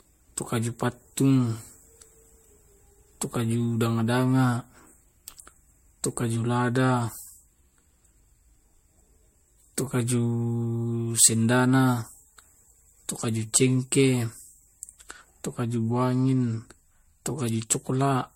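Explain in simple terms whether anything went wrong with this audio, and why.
The speech has a swirly, watery quality from start to finish, with consonants and word onsets sounding smeared and the overall tone oddly hollow. That points to generation loss: the recording was likely squeezed with MP3-style compression, unpacked and squeezed again, about four times over. Each pass adds its own small damage, and the damage piles up. A single rough compression would sound dull, with nothing above about 16.5 kHz, but not this churning and hollowed-out.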